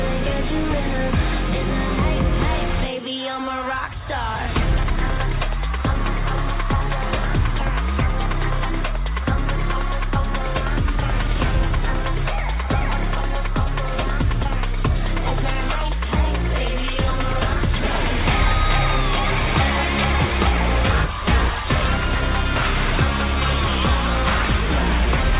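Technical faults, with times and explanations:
No technical faults detected.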